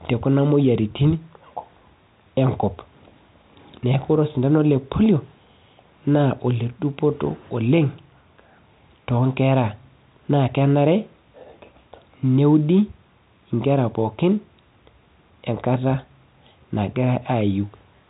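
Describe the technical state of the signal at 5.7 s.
At 5.7 s the speech signal is intact, carried by G.711 telephone coding with its usual limit of nothing above 4 kHz.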